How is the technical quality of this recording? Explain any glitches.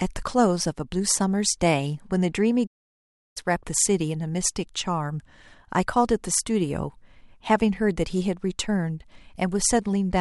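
The recording has one clear glitch, a playback stall from 2.66 to 3.37 s. The speech cuts off in mid-flow and the output falls completely silent for about 0.69 s before the sound picks up again. A gap this abrupt and this long is likely caused by the player running out of buffered data, or by its audio thread being blocked, so nothing reached the output until it recovered.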